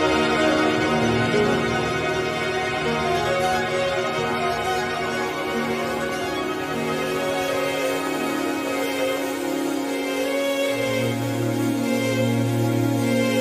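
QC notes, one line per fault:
2.93–9.69 s, train of clicks. About thirty sharp clicks of much the same shape tick over the sound, at roughly 4.3 per second with uneven spacing. They peak a few dB above the sound. The likely cause is interference from nearby equipment or a faulty connection or power supply.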